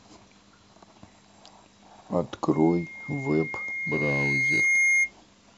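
A microphone in the chain is picking up the loudspeaker it drives, and at around 2.1 kHz the loop gain rises above one, producing loudspeaker feedback squeal from 2.53 s to 5.12 s. That frequency reinforces itself on every pass around the loop. A thin, steady tone swells over roughly two seconds into a piercing whistle that sits about 5 dB above the speech, then stops.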